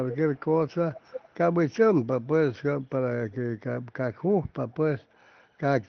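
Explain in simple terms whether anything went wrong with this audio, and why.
Yes, there is an echo leak: at 0.09–0.17, 0.34–0.41, 0.94–1.34, 3.31–3.35 and 5.10–5.15 s, scraps of speech return about a third of a second late, clearest near 0.09 and 0.94 s. The likely cause is a speakerphone whose echo canceller let some sound through. Unlike room reverberation, which smears sound, this is a separate, delayed repeat.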